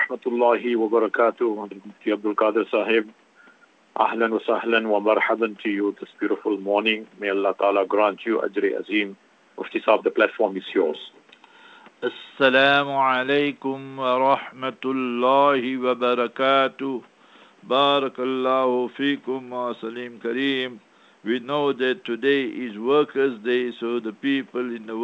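Nothing here stands out as a fault: the sound has come through a call connection that keeps everything up to about 8 kHz and nothing above, which fits a wideband codec such as G.722, and no dropouts, glitches or other trouble turn up along the way.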